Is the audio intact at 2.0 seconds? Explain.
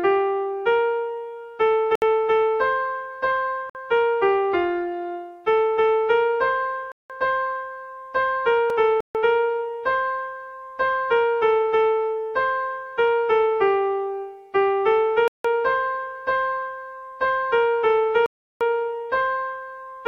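No. A Bluetooth stall cuts the sound to silence from 1.95 to 2.02 s, a gap of about 66 ms. Playback then resumes. The likely cause is radio interference delaying packets, so the headphones' buffer ran empty until the resent data arrived.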